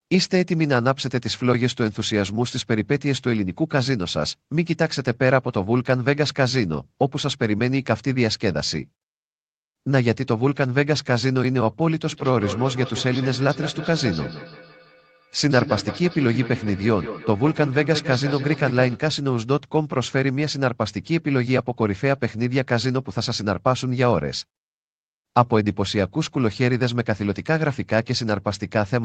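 From 12.12 to 19.04 s, a feedback echo between two devices appears. Another device replays this microphone's signal, and the microphone picks it up again. No echo canceller catches it. The speech returns roughly every 150 ms, thin and ringing, peaking about 10 dB below the speech.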